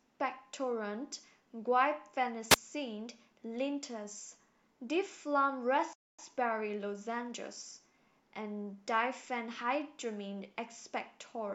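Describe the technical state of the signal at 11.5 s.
At 11.5 s the signal is intact, without any audible dropout, distortion or other fault.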